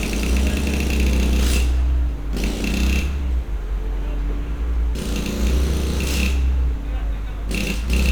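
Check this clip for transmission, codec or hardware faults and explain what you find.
Sample clock jitter runs through the whole clip, from start to finish. The converter's sampling clock wanders by a few microseconds, so each sample lands slightly off its intended instant. Where the waveform changes steeply, that timing slip becomes an amplitude error, here roughly 30 dB below the signal. It sounds like a fine hiss or grittiness riding on loud, bright passages and disappearing in quiet gaps. On a spectrogram, a diffuse noise floor rises and falls with the sound's energy and is strongest at high frequencies. The waveform looks slightly fuzzy on steep edges.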